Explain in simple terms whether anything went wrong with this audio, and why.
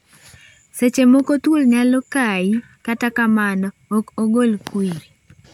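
Nothing stood out as wrong when listening to this speech recording.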